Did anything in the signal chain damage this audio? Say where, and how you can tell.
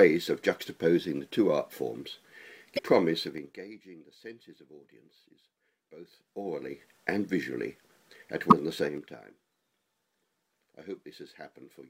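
Yes, three kinds of damage are audible, at three different stages.

Sample clock jitter sits at the converter and runs through the whole clip. A faint hiss and roughness rides on the sound, swelling on loud, bright passages and disappearing in the gaps. The timing wander is on the order of a microsecond or two, leaving an error about 45 dB below the signal. On a spectrogram it shows as a broadband haze that tracks the signal's energy and high-frequency content, absent in silence.

Damaged data in a compressed stream points to the codec or storage path. At 2.75–2.79 s and again at 8.49–8.53 s there is a brief glitch lasting about 40 ms, where the decoder misreads corrupted frames and hunts for the next valid header. On a waveform each appears as a short burst of shape unrelated to its surroundings. On a spectrogram it is a smeared block of energy with abrupt edges.

Zipper noise comes from gain applied in coarse steps in the driver, buffer or playback stage. 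From 3.21 to 3.64 s the level drops about 20 dB in 4 dB steps. From 6.02 to 6.88 s it rises about 20 dB in 2 dB steps, and from 8.81 to 9.23 s it falls about 15 dB in 3 dB steps. Each ramp ticks at roughly ten steps per second. The waveform envelope shows a staircase, and the spectrogram shows a thin vertical click line at each step.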